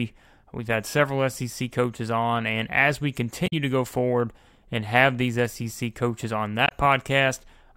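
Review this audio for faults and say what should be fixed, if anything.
Damaged data in a compressed stream at 3.44 to 3.53 s, after "on and as we" and before "to go forward and", and at 6.65 to 6.72 s, after "coaches on". Corrupted bytes make the decoder misread frames and resynchronise, producing brief glitches. Prevent this by verifying file integrity with checksums and re-fetching the source.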